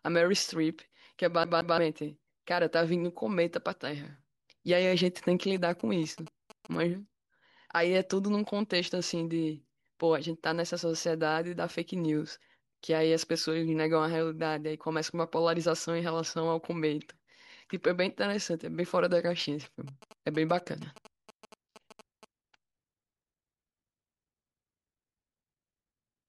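From 1.44 to 1.78 s the speech behaves like a CD stuck on one turn: a 0.17 s fragment repeats twice, with brief mutes at each laser jump. From 5.56 to 6.76 s and again from 19.64 to 22.25 s, GSM signalling bursts appear as galloping ticks and 217 Hz buzz, roughly 20 dB below the speech, rectified from a nearby phone.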